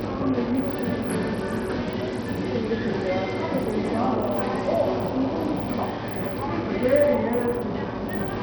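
Bluetooth SBC compression throughout: the treble flickers and drops out under gritty noise, likely from starved sub-band bit allocation, which fits a low bitrate near 64 kbps.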